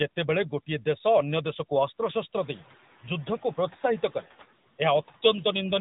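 Throughout the speech, the background sinks between phrases and swells back under them. These are noise suppressor artifacts: frame-by-frame gain pulls steady-noise bands down by about 9 dB. They are most noticeable once the room noise climbs at around 2.5 s.

Also throughout, the voice is muffled and plainly buzzy and synthetic, with nothing above 3.8 kHz. This is the AMR narrowband mobile codec at work, its pulse-driven vocal-tract model running at 10.2 kbps.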